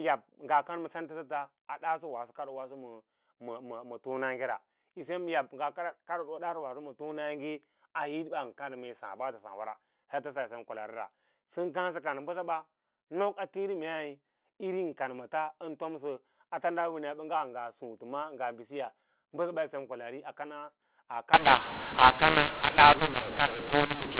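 From 21.3 s to the end at 24.2 s, mu-law and A-law are mixed up: speech coded as mu-law is decoded as A-law. The scrambled levels turn the speech harsh, and pauses fill with hiss. Unlike clipping, even the quietest moments are distorted.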